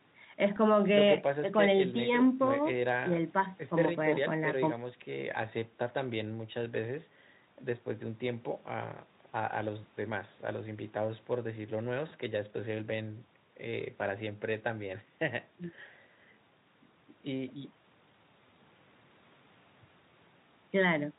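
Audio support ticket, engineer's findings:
Engineer's findings: no audio fault found for this support ticket.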